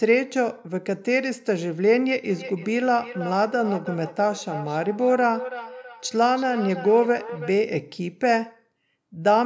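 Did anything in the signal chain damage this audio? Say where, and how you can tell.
Yes. Feedback echo between two devices from 2.3 to 7.55 s: each phrase returns roughly every 300 ms, thinner and ringing, peaking about 13 dB below the speech. A second device's loudspeaker is re-entering the microphone, which its echo canceller cannot remove.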